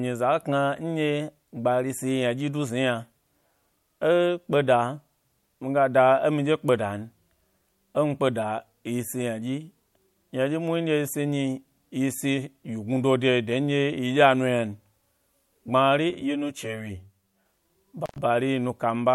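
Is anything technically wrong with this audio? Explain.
Yes, the speech has two faults near the end.

From 16.10 to 17.46 s there is channel delay with comb filtering. One channel arrives about 10 ms late, and when the pair is folded to mono, content common to both cancels at evenly spaced frequencies, starting around 50 Hz and repeating roughly every 100 Hz. The voice turns hollow and phasey. Unlike flanging, the notches stay fixed rather than sweeping, and unlike room reverb there is no added tail.

At 18.06 to 18.18 s an intermittent contact opens for 106 ms. A loose plug or cable momentarily breaks the signal path, so the sound cuts out with crackle at both edges, and faint hiss remains while the line is open. That crackle and hiss distinguish it from a digital dropout, which falls to clean silence with no hiss underneath.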